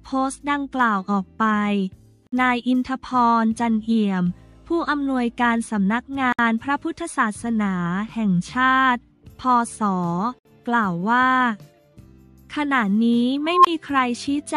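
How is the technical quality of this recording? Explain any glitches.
The recording has two kinds of glitch, a repeating dropout and a squeal near the end.

First, there's a gap at a join of encoded pieces at 2.27–2.32 s, 6.32–6.39 s and 10.39–10.45 s, so one every 4 s. Each is a hole of about 56 to 64 ms with smeared edges, where separately encoded chunks were butted together with their start delay and end padding left in. The sound then picks up right where it stopped.

Then at 13.45–13.67 s there's an unstable filter. A tone around 1 kHz swells over roughly 190 ms into a loud squeal, clips, and drops into about 23 ms of silence. That's a recursive filter with bad coefficients running away until it overflows and resets.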